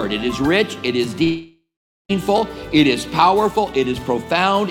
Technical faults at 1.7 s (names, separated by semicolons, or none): long network dropout